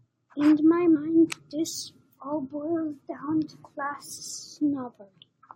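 At 0.95 s and 4.17 s, compressed frames are skipped. The speech jumps ahead by about 70 ms, then about 20 ms, fitting 21.3 ms frames.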